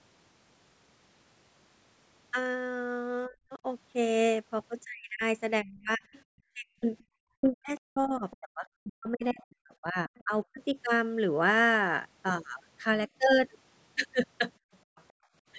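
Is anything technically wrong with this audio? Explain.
Yes. This speech clip has three related echo-canceller faults.

Speech suppressed in double talk occurs from 3.27 to 3.65 s and again across 4.85 to 10.77 s. The talker's level drops by roughly 40 dB in pieces, about 300 ms in the first stretch and about three seconds in the second. That most likely happened because both sides spoke together and the canceller could not separate near speech from loudspeaker echo, so it attenuated everything.

Other side's voice leaking through appears from 6.13 to 8.37 s and from 10.07 to 10.46 s, roughly 25 dB below the talker, and again from 14.73 to 15.13 s, roughly 35 dB down. A second voice is faintly audible. This is likely residual loudspeaker echo that the canceller failed to remove from the microphone.

Background gated by the echo canceller runs from 14.59 to 15.34 s. The room sound drops by about 40 dB for around 400 ms in total, then returns. 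The canceller clamped the microphone while the loudspeaker was active and released it afterwards.

The call microphone processing is also audible. Nothing above 8 kHz is present, and the lowest bass is trimmed as normal.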